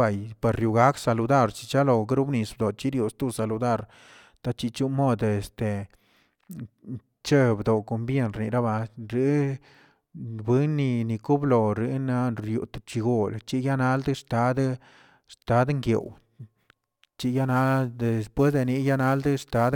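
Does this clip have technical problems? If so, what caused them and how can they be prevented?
Yes. From 16.01 s to the end, sample clock jitter adds roughness: timing wobble of around ten microseconds causes errors about 30 dB below the speech, strongest on loud, bright sounds. Unlike steady hiss, it disappears in pauses. Prevent it with a clean, stable converter clock.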